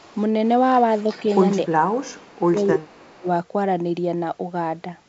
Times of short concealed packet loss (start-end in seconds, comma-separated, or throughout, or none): none